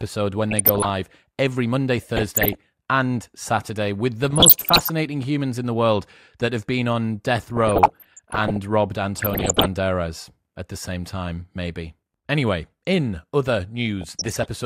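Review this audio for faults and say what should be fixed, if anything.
DAB burbling shows up six times: 0.50–0.89 s, 2.17–2.55 s, 4.24–4.90 s before "humans in the world", 7.57–8.57 s after "have been on death", 9.17–9.66 s, and 14.01–14.46 s after "in other". Bit errors of around 0.4 to 1.5 percent are slipping past error correction, so wrong samples put short noise blips in single sub-bands and corrupted scale factors make sub-bands jump in level. Improve reception with better antenna placement or a stronger multiplex.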